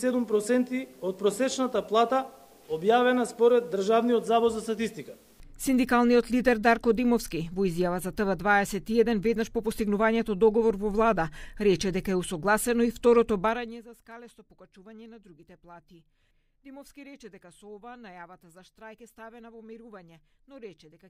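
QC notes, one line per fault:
13.42 to 13.89 s, zipper noise. The level drops by roughly 20 dB over about half a second. The drop is not smooth. It moves in coarse steps, around 150 of them each second. Each step is an abrupt jump in gain, and each jump leaves a tiny click. Strung together, the clicks form a fast ticking buzz that rides on the sound for as long as the fade lasts.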